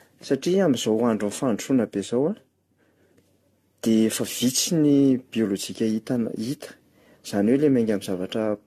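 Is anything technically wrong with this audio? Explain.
Yes. Throughout, the speech sounds swirly, hollow and smeared, with blurred consonant attacks and nothing above 14 kHz. This is likely generation loss from roughly seven repeated lossy encodes, consistent with 64 kbit/s AAC-LC.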